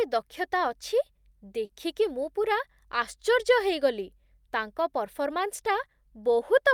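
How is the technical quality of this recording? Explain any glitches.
The recording has one glitch: a short concealed packet loss from 1.65 to 1.71 s. About 40 ms of the speech stream failed to reach the decoder in time, so the receiver invented a 40 ms stand-in by extending the sound just before the gap, continuing its pitch where it was voiced and substituting shaped noise where it was not, then crossfaded back into the real audio. You hear a brief smeared wobble in the speech.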